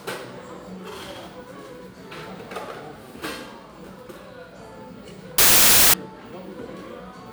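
At 5.38 s the samples are built from the wrong bytes for about half a second, so the jittery low bits take over and you get a blast of loud, harsh broadband noise until 5.94 s.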